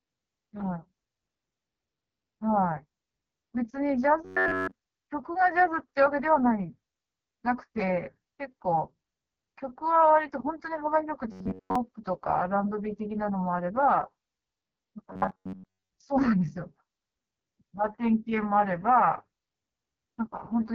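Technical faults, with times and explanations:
Throughout: AMR wideband (HD Voice) codec at 6.6 kbit/s, the lowest rate it offers, and you can hear it. The speech comes out rough and raspy because the codec rebuilds the vocal tract from a sparse pulse model with very few bits to spend, so the fine detail just isn't there. There's nothing at all above about 7 kHz, and the top band is only shaped noise standing in for the real high end.
4.25–4.72 s, 11.32–11.76 s and 15.13–15.89 s: robotic sound from repeated short buffers. Each stretch goes into a rigid, metallic buzz at about 94 Hz that loosely tracks the speech. The likely cause is the playback side running short of fresh audio and looping a chunk of roughly 10.7 ms to fill the gap, which imposes the fixed-rate buzz. The first stretch sounds entirely looped, the later two mostly so.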